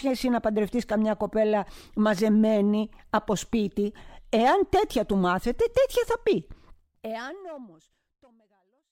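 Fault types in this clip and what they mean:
No technical faults are present.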